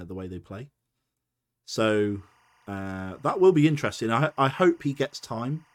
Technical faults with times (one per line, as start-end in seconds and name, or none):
1.95-5.74 timecode bleed